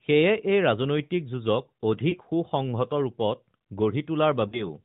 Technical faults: lost AMR speech frames

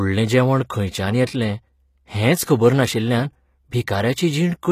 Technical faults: HE-AAC compression

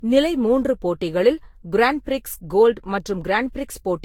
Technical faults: generation loss

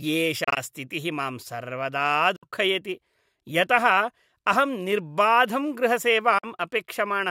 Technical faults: Bluetooth dropout

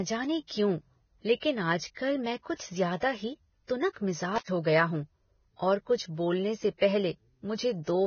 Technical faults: Vorbis compression; intermittent contact

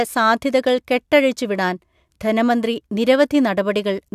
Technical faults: none

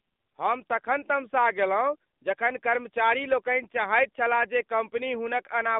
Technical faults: AMR narrowband mobile codec

